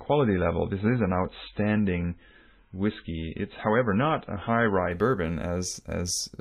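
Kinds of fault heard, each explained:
Adaptive stream starting at a low bitrate: from 0.0 to 4.91 s the speech is dull and smeared, with nothing above 4 kHz and heavy coding artefacts, which fits a very low-bitrate MP3 of around 16 kbit/s. The player began on this cheap version to start playback quickly, then switched up once it had gauged the connection. At 4.91 s the treble and clarity return abruptly with no gap, consistent with a step up to roughly 128 kbit/s.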